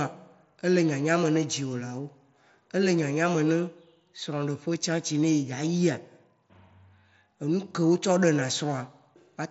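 No technical faults can be heard in this speech.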